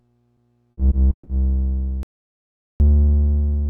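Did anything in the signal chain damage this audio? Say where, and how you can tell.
Yes. Repeated packet loss on the network stage hit the stretch from 0.71 to 1.29 s. Four gaps, totalling 240 ms and the longest 140 ms, were each patched by extending the preceding sound. About 41% of that span is concealment, giving a choppy, robotic texture.

An audio dropout to silence runs from 2.03 to 2.80 s. For 0.77 s the signal falls to silence with no room tone, and then it resumes mid-flow. The likely cause is a lost input that the recorder kept writing as silence.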